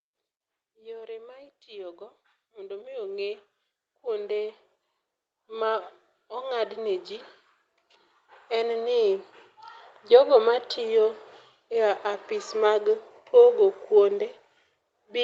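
The automatic gain control judged the input too quiet and raised its gain gradually, twice. From 0.79 to 3.46 s it climbs by about 9 dB, so the speech and the room background swell together over nearly three seconds; from 5.48 to 7.11 s a second automatic gain rise adds about 5 dB more. Beneath this, the call path's band limit leaves nothing above 8 kHz.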